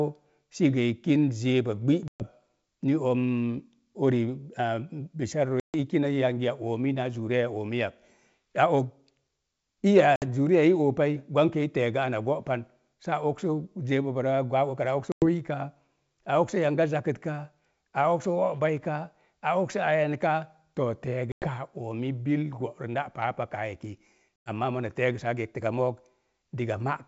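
Packet loss on an ADPCM call cuts hard-edged silent holes at 2.08, 5.6, 10.16, 15.12, 21.32 and 24.41 s. Each lasts 60 to 140 ms. Afterwards the decoder's predictor and step size are out of step with the sender's. Speech returns with some distortion and settles within some tens of milliseconds.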